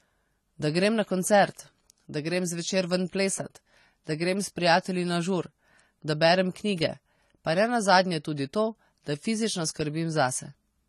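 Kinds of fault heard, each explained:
AAC compression: The speech sounds dull and smeared, with a fizzy, warbling texture on sibilants and nothing above 13.5 kHz, likely from AAC-LC coding at a rate that fits about 32 kbps. Unlike a plain low-pass filter, the damage extends into the audible band.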